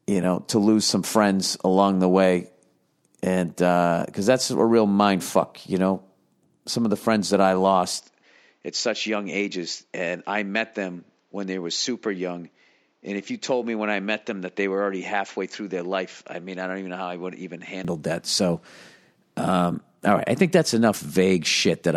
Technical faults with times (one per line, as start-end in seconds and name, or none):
8.00-17.85 input switched to a poorer device